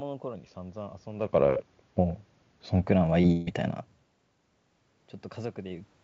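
Speech carried over a call link whose G.722 coding at 64 kbps leaves nothing above 8 kHz, with room noise underneath and level changes near 1 s and 4 s where the talker shifts at the microphone. From 0.35 s to 2.82 s the audio plays about 6.3% slow and sits roughly 113 cents flat, a bit more than a semitone, then snaps back to normal speed and pitch. That is likely a drift correction step, where clock-matching software changes the playback rate in a single jump to refill its buffer. On a spectrogram the voiced harmonics sit visibly lower across that span and jump up at 2.82 s, while the waveform's syllables are stretched. At 3.21 to 3.25 s there is a short concealed packet loss: about 20 ms never arrived, and the decoder covered it by continuing the preceding sound before blending back, heard as a brief smear or wobble. On a spectrogram it shows as a thin vertical band of over-regular, smoothed harmonics or noise with no onsets. 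Just after, from 3.31 s to 3.49 s, comes what is likely a long network dropout: about 160 ms is missing, and roughly 150 ms of it is filled with a synthetic continuation that fades, never reaching full silence. The waveform shows a decaying, repetitive stretch, and the spectrogram shows frozen, blurring harmonics that thin out before real speech resumes with that portion lost.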